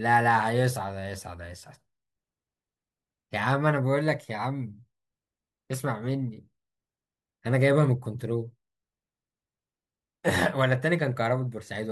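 No technical faults can be heard anywhere in the recording.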